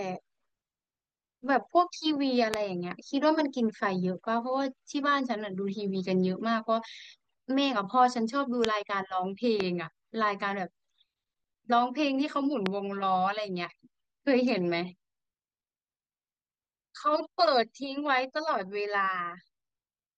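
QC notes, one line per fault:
2.54–2.56, 8.65–8.67, 9.60–9.62 and 12.66–12.68 s, loud pop: single sharp thumps, each well above the speech, the first and loudest about 25 dB over it, likely voltage spikes from a switch, plug or static. Unlike a dropout, the speech carries on underneath without a gap.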